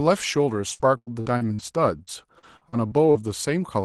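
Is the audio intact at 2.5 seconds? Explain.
No. Repeated packet loss (robotic sound) runs from 2.03 to 3.17 s: repeated gaps, longest 47 ms, are patched by stretching the last sound, giving choppy speech with pieces missing.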